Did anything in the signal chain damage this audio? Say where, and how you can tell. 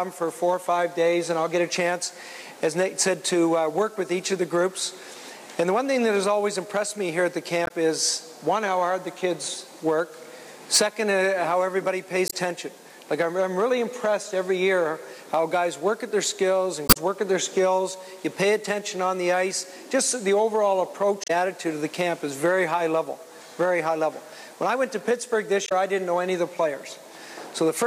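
Yes, at the codec stage: damaged data in a compressed stream. Short glitches of about 70 ms land at 7.64, 12.27, 21.24 and 25.65 s, plus a longer one around 16.86–16.97 s. Corrupted bytes make the decoder misread frames and lose sync until it finds the next header.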